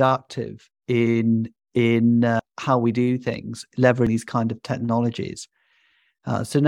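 At 2.39 s, between "in in" and "how we do things", compressed frames are skipped: the speech jumps ahead roughly 0.2 s, consistent with two missing frames of about 93 ms. At 4.07 s, before "these kind of", roughly 0.3 s vanishes.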